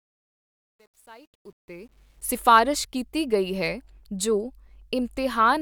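From the very start up to about 2.29 s, the speech fades in, and that fade carries truncation distortion. The quietest stretch, roughly 0.00 to 1.71 s, sounds gritty. The stage doing the fade kept too few bits and added no dither, so low levels collapse into coarse square steps. The graininess fits something like 10-bit resolution.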